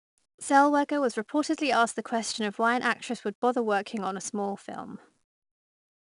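From start to finish the speech carries 4-bit ADPCM compression, and it's plainly audible. Each sample is coded as a coarse step from a prediction, so there's a gritty hiss that swells with every loud syllable and roughness on sharp onsets where the step size lags behind. Nothing survives above about 10.6 kHz, which points to a sample rate near 22 kHz, consistent with a stream around 89 kbps.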